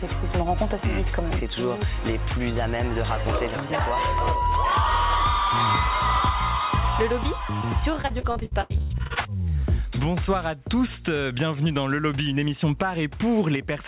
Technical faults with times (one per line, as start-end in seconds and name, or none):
8.02-9.18 repeated packet loss (robotic sound)